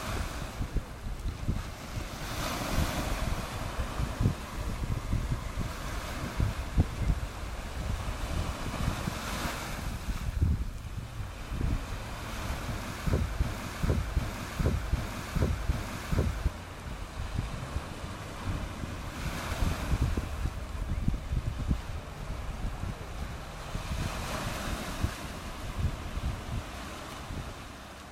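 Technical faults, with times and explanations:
13.43–16.48 s broken-record loop: a 0.76 s fragment plays four times back to back, likely a stalled stream resending its last buffer, so the audio due then is lost.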